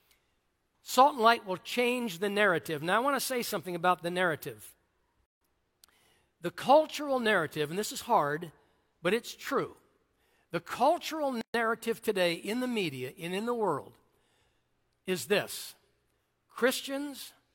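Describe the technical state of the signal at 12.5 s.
At 12.5 s the speech signal is intact, with no audible fault at that moment.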